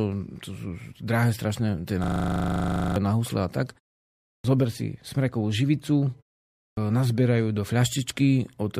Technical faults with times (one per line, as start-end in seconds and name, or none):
2.04-2.96 system hang loop
4.38-4.44 clipped start after a pause
6.70-6.77 clipped start after a pause